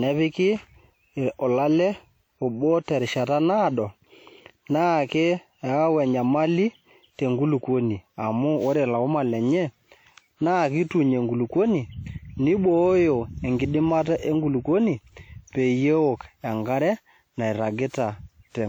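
Throughout the speech, the sound is swirly, smeared and hollow. Consonant onsets blur. This is generation loss, likely from around fifteen passes through WMA near 96 kbit/s. Each pass adds fresh quantisation noise and spectral holes.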